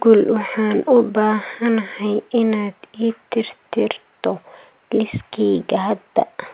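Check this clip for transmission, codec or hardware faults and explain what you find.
I find no faults to explain in this clip.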